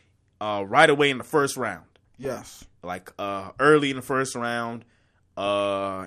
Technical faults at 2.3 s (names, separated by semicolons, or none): MP2 compression; DAB burbling